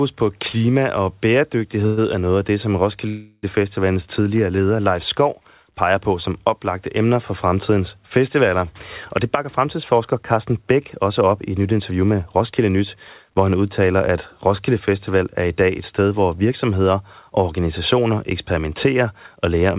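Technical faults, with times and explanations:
1.86 s and 3.08 to 3.45 s: call audio freeze. At 1.86 s the sound stalls for about 0.11 s, carried on as a short buzzy tail before resuming. The second stall, just after "af det som", is longer, about 0.35 s. The held sound fades and drops to silence for about 30 ms near its end. Both times the audio picks up exactly where it stopped, with nothing lost, only pushed later. This is likely packets arriving late, so the jitter buffer ran dry and the receiver stretched the last sound to fill each wait.
9.24 to 12.77 s: jitter buffer speed-up. Across these three and a half seconds the speech runs at about 109% of its normal rate with the pitch unchanged, so it sounds hurried, ending just before "hvor han udtaler at". The receiver had built up more buffered audio than it wanted. It caught up by cutting out many tiny slices one or a few pitch periods long, roughly 0.3 s in all. 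The band-limited G.711 call sound, with nothing above 4 kHz, continues underneath.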